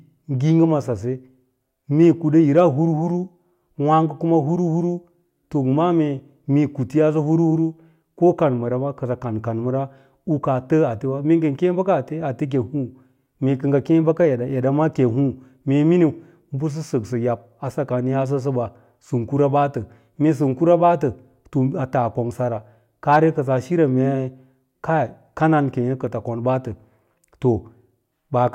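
Hard clipping flattens speech peaks at 2.03 to 2.06 s, 2.58 to 2.62 s and 23.12 to 23.17 s, overdriven by about 1, 2 and 2 dB. The waveform shows squared-off tops; the spectrogram shows brief vertical smears of high harmonics, heard as short crackles.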